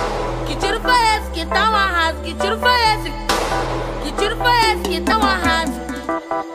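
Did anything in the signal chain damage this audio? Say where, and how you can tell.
Yes. There is damaged data in a compressed stream at 5.11 s, a fault at the codec decoding stage. It is heard as one short blip, less than 20 ms long. Some bytes of the compressed data were wrong at that point. The decoder could not read those frames properly. It lost sync and searched for the next valid frame header. The misread data or the gap it left comes out as that brief glitch.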